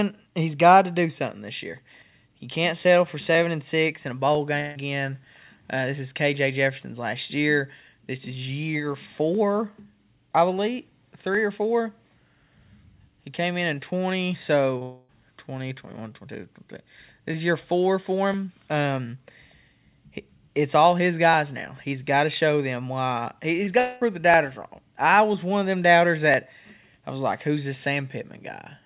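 At 4.6 to 4.77 s the speech turns into a smeared, fading buzz for about 0.16 s. This is a long network dropout, likely caused by a run of packets that never arrived, which the receiver covered by stretching the last sound. The gap never falls to silence. On a spectrogram it shows as flat, blurred harmonics losing energy. In the waveform it is a smooth, decaying envelope in place of normal syllable shapes.

At 14.77 s a short concealed packet loss of about 40 ms adds a brief wobble. Straight after it, from 14.83 to 15.1 s, a second long dropout replaces about 0.26 s of speech with the same fading continuation. The same pairing comes back later. There is a short concealed packet loss of about 20 ms at 23.65 s, heard as a small smear. Then a long dropout from 23.79 to 24.03 s fills about 0.22 s.

On a spectrogram the short losses look like narrow vertical smudges where formant detail briefly repeats. 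In the waveform they are short kinks. Across the whole clip the call path leaves nothing above 4 kHz, which fits a narrowband telephone codec such as G.711.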